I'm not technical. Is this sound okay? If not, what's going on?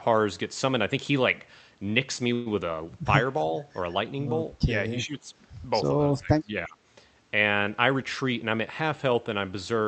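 No. There are three kinds of problem.

Call audio freeze, from 2.33 to 2.48 s: the speech briefly turns into a short fading buzz or hiss, then carries on where it stopped. Data packets were likely held up on the way, so the receiver filled about 125 ms of waiting without losing any speech.

Speech suppressed in double talk, at 4.98 to 5.27 s and 6.11 to 6.77 s: the talker's voice dips, clearly in the first stretch and much more in the second. The echo canceller likely mistook both sides talking at once for echo and turned the speech down.

Jitter buffer speed-up, from 7.93 to 9.15 s: the speech runs about 9% fast at the same pitch and sounds a little hurried. Too much audio had built up in the receiver, so it cut out roughly 100 ms in many tiny pieces to catch up.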